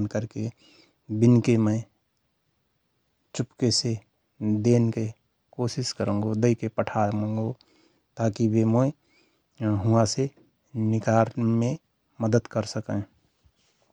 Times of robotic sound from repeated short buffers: none

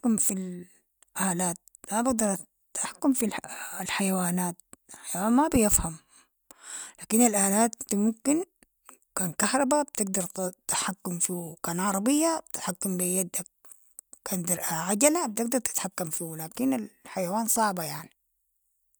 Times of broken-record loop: none

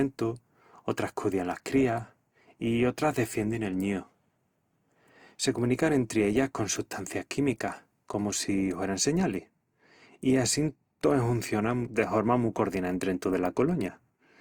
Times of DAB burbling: none

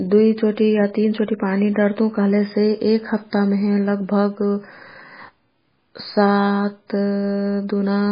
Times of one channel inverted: none

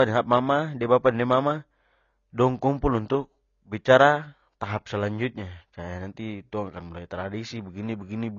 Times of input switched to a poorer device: none

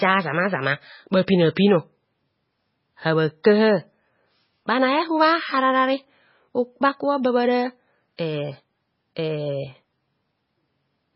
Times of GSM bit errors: none

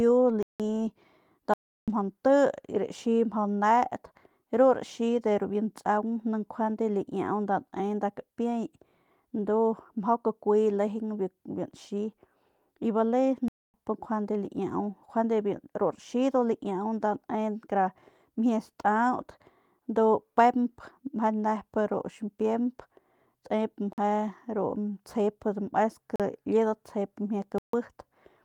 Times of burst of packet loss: none

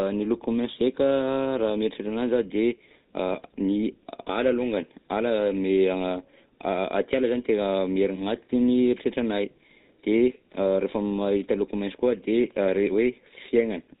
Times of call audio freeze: none

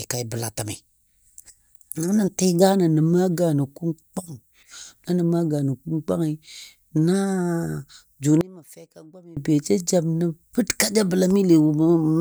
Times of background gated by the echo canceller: none

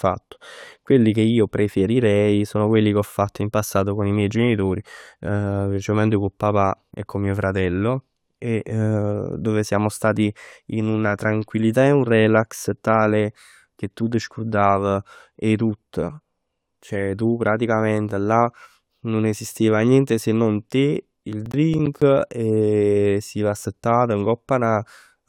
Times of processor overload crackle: 21.45-22.02

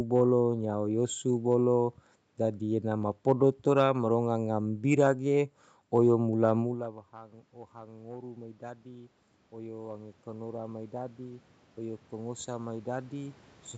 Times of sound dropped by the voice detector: none

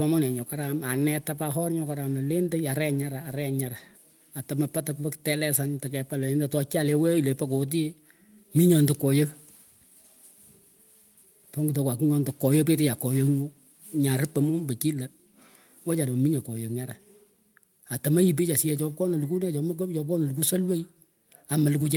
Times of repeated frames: none

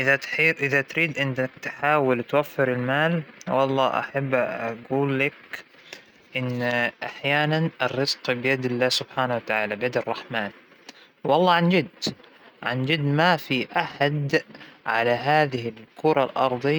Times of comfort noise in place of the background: none

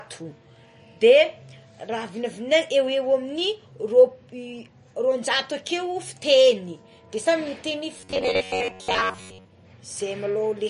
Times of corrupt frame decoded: none

